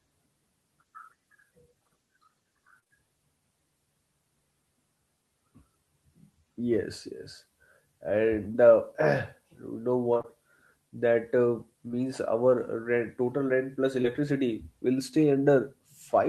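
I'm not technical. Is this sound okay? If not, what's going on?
No. Twice, from 2.79 to 2.92 s and from 10.14 to 10.26 s, the call connection dropped small chunks of audio several times in quick succession. This is repeated packet loss (robotic sound): each hole was patched over, so the speech turns choppy for about a tenth of a second.

Three times, at about 8.52 s, 11.88 s and 14.02 s (just after "total rent plus"), a single piece about 20 ms long failed to arrive. This is short concealed packet loss: the receiver stretched the previous sound to fill the gap, leaving a brief smear or blip.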